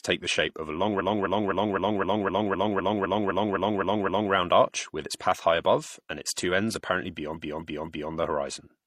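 From 0.96 to 4.29 s, after "shape of a long", repeated frames loop one 0.26 s block 13 extra times; a shorter stutter follows at 7.32 to 8.09 s, after "its two ends apparently".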